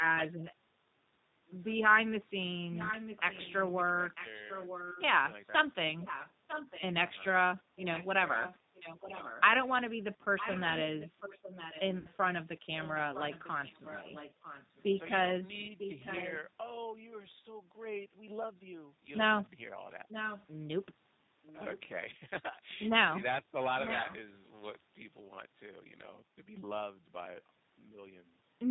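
A speech recording carried over a G.729 codec link for its whole length. The low-rate coding, which fits G.729A at 8 kbit/s, rebuilds each 10 ms frame from a vocal tract filter, a pitch predictor and a few pulses, so nothing above 4 kHz survives. The result is plainly audible damage: the voice stays intelligible but sounds rough, slightly synthetic and boxy throughout. VoIP packet loss concealed by the speech codec strikes twice. At 6.22 to 6.26 s about 20 ms of audio went missing, which fits one dropped packet. At 11.99 to 12.09 s about 60 ms went missing, consistent with three packets in a row. Each time the decoder filled the hole by extending its last pitch and filter settings while turning the gain down. The gaps become a short buzzy tone or coloured noise that fades, and the speech sounds weak or distorted for a moment after audio returns. From 8.99 to 9.08 s the voice dips by roughly 10 dB for around a tenth of a second before recovering. 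This is likely speech suppressed in double talk: with both ends talking at once, the echo canceller could not tell this talker from returning loudspeaker echo and pulled the level down.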